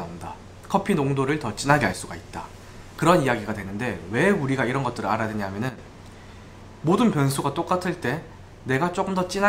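At 1.70 s the sound and its background noise leap up together by about 6 dB until 1.93 s, and at 5.69 s both drop by about 9 dB until 5.78 s. These sudden gain jumps likely come from digital gain being changed between adjacent samples with no ramp.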